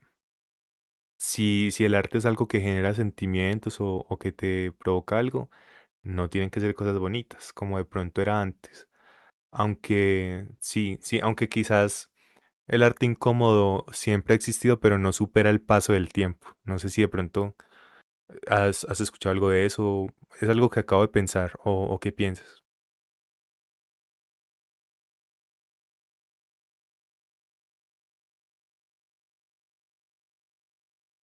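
Nothing in this speech recording stood out as a technical fault on listening, and the call path it came through behaved as such a link normally does.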